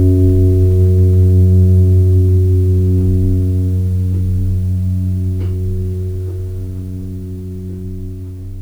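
Music, with no technical faults heard anywhere in it.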